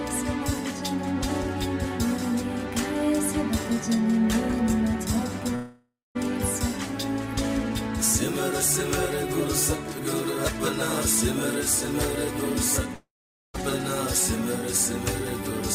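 At 5.55 to 6.17 s and again at 12.95 to 13.56 s, the last sound smears into a fading buzz, then silence of about 0.21 s and 0.47 s. About 0.6 s is skipped each time, likely a long network dropout. Spectrograms show decaying smeared bands, then blank.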